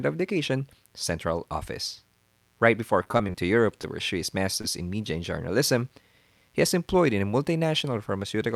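Switching spikes from a dimmer, rectifier or poor shielding ride on the 60 Hz mains throughout, adding a faint, raspy mains buzz roughly 40 dB below the speech.

From 3.03 to 3.36 s, repeated packet loss leaves several short holes, the longest about 21 ms, patched by extending prior audio. About a quarter of that stretch is concealed, giving choppy, robotic speech.

Short concealed packet loss follows at 3.82 to 3.85 s, just before "pursue his", and at 4.61 to 4.66 s, between "pursue his" and "in media and journalism". In each, about 20 ms never arrived and was filled by continuing the preceding sound, heard as a brief smear or wobble.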